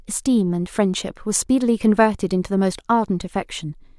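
No technical faults are audible.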